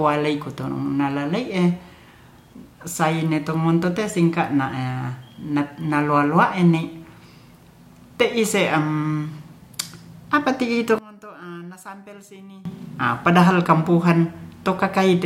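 Right after "apa ti'i", from 10.99 to 12.65 s, the speech drops by about 23 dB and goes faint and distant until "a padahal". That's likely one channel inverted, so the centred voice cancels out when both sides sum to mono.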